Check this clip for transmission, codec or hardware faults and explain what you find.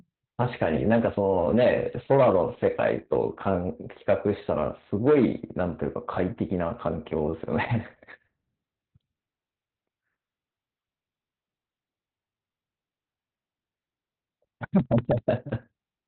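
One codec fault runs through the whole clip. From start to finish the speech sounds muffled, hoarse and faintly robotic, with nothing above about 4.3 kHz. This is Opus voice compression at heavy damage: the narrowband SILK mode and its coarse excitation coding point to a bitrate near 8 kbps.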